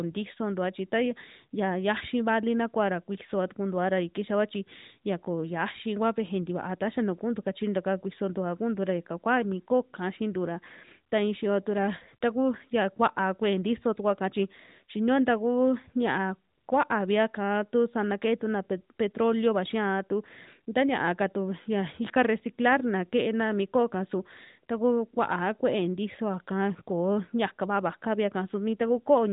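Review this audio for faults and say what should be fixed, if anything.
Nothing stood out on listening, so there is nothing here that needs fixing.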